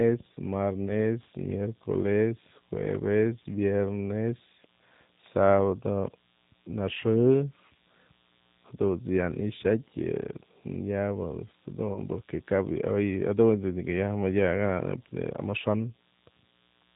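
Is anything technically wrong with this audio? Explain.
Yes. The whole recording has passed through the G.729 codec, and there is a short VoIP packet-loss dropout concealed by the speech codec near the end.

The G.729 coding runs throughout, and its damage is plainly audible. The codec rebuilds speech from a vocal tract filter, a pitch predictor and a sparse set of pulses per frame, at a rate consistent with 8 kbit/s G.729A. Speech stays intelligible but sounds rough and slightly synthetic. A spectrogram shows nothing above 4 kHz, and the harmonics look smeared and grainy.

The VoIP packet loss concealed by the speech codec runs from 11.94 s to 11.99 s. About 20 ms of audio went missing, which fits a single lost packet. The decoder filled the gap by extending its last pitch and filter settings at falling gain, so the sound is briefly stretched and fades. It stays weak for a moment afterwards while the decoder rebuilds its state. 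On a waveform this shows as a dip in amplitude. A spectrogram shows a short stretch of extended, fading sound.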